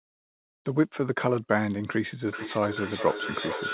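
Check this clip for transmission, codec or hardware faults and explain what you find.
Two faults turn up, one at each end of the clip, all heard through a narrowband call path that tops out at 4 kHz.

From 0.0 to 0.65 s there's comfort noise in place of the background. The real room sound is swapped for a flat, featureless hiss, about 28 dB quieter. The likely cause is discontinuous transmission: the sender goes quiet during silence and the receiver synthesizes stand-in noise.

From 2.24 s to the end there's feedback echo between two devices. The speech comes back at roughly 400 ms intervals, thinner and ringier each pass, peaking about 7 dB below the speech. Another device in the room is replaying the call into the microphone, and no echo canceller catches it.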